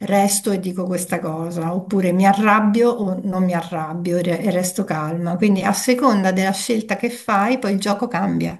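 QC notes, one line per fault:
6.93–7.73 s, block size mismatch (padded): a 46.9 Hz buzz from zero-filled gaps in each short block, which fits 1024-sample reads; pace and pitch stay essentially normal.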